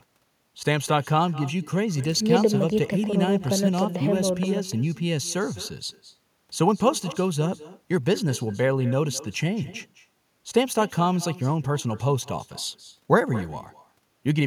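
Throughout, there is echo with no canceller. The speech returns about a fifth of a second later. The copy sits about 18 dB lower, and thin.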